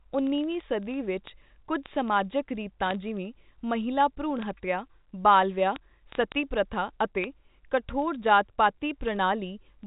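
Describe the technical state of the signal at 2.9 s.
At 2.9 s the signal carries word clock ticks, present across the whole clip from 0.10 s to 9.86 s. The receiving device is not locked to the sender's clock, and the mismatch is on the order of several hundred parts per million. Each time the clocks slip, one sample is dropped or repeated, producing sharp, unevenly strong ticks at a steady rate of roughly one every 30 ms.

Overlapping this, bit errors on a digital phone line hit the G.711 A-law stream between 2.86 s and 2.95 s. Flipped bits corrupt individual samples, and errors on the sign or high-order bits give sharp ticks. The result is a brief stretch of errors, a little under a tenth of a second long, laid over the speech without changing it.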